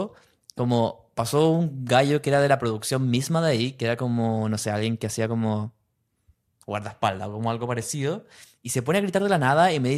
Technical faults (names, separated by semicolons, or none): none